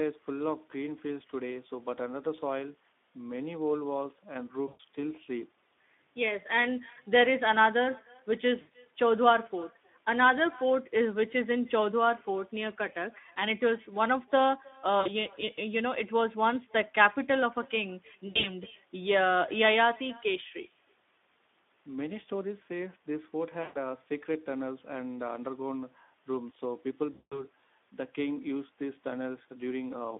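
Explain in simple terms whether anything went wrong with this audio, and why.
Echo with no canceller runs through the whole clip. The far end played the call through a loudspeaker, its microphone picked that sound up again, and nothing removed it before sending it back. So every phrase is followed about a third of a second later by a faint, thin copy of itself. It is quiet, but it trails each phrase the whole way through.

The Speex codec damage is also present throughout. Speex is an older speech codec from internet calls and game chat. Here it was set to a low quality level, so it has too little detail to rebuild the speech faithfully. The speech comes out noisy and hoarse. It also sounds boxed in like an old phone line, with nothing above about 3.6 kHz and little deep bass.

VoIP packet loss concealed by the speech codec happens six times: 4.67 to 4.80 s, 8.61 to 8.72 s, 15.01 to 15.08 s, 18.27 to 18.49 s, 23.63 to 23.77 s and 27.13 to 27.46 s. 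Each time, chunks of the call never arrived. The decoder guessed by stretching the last sound it had. That guess turns into a buzzy or smeared tone that fades, and the speech stays weak and distorted briefly after the data returns. The longest gap is at 27.13 s. At 18.27 s the losses come in scattered bursts rather than one gap.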